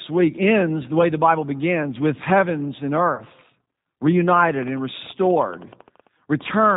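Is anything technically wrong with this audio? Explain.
Yes, two things. First, the whole clip has gone through the G.729 codec at 8 kbit/s, and the damage is plainly audible. The codec rebuilds speech from a vocal tract model, a pitch predictor and a handful of pulses per 10 ms frame, so the fine detail is approximated. You hear a rough, slightly synthetic quality, and nothing above 4 kHz gets through, so the top end is dull.

Second, there's VoIP packet loss concealed by the speech codec from about 3.14 to 3.23 s. Around 40 ms of audio went missing, which fits two lost 20 ms packets. The decoder fills the gap by carrying on from its last pitch and filter settings with the gain stepped down each frame. That comes out as a smeared stretch, a buzzy tone or coloured noise, that fades. Because each frame builds on the one before, the speech stays weak or distorted for a short while after the packets return, which is why the disturbance runs past the actual 40 ms gap.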